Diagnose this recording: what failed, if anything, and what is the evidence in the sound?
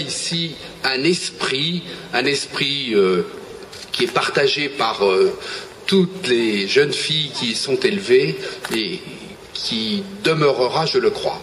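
Nothing in the signal chain shows a failure: no stage, from wiring and conversion through buffering, processing, transport, storage or playback, leaves any audible defect.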